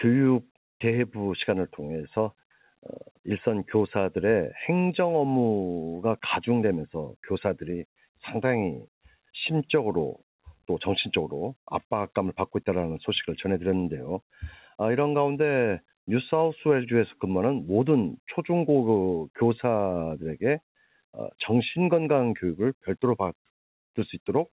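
No technical faults can be heard anywhere in the clip. It has passed through a WebRTC call path, and the sound stops sharply at 4 kHz, a narrow telephone band that points to G.711 mu-law at 64 kbps.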